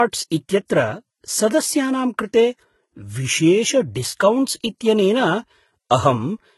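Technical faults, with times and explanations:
Throughout, transcoding between lossy codecs: the speech carries two layered sets of coding artefacts, with nothing above 11.8 kHz. This likely comes from a low-rate HE-AAC encode later re-encoded to Vorbis, which fits 16 then 40 kbit/s. Vorbis spends bits preserving the earlier damage and adds its own.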